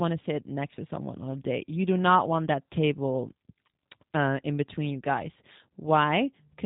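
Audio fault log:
throughout, G.729 codec: nothing above 3.8 kHz, and speech rebuilt from sparse pulses sounds plainly rough and synthetic, unlike simple band-limiting, which only muffles.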